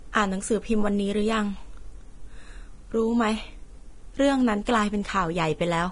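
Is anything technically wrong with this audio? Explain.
Yes. Throughout the speech, the treble has a hissy, grainy texture, and consonant attacks sound smeared and soft. Nothing is present above about 10.6 kHz, so the top end stops abruptly. This is likely Vorbis compression at a low setting, which fits a bitrate near 30 kbps. The encoder lowered its cut-off and quantised the remaining high band so coarsely that fine detail turned into noise of similar energy, causing the roughness and blurred onsets.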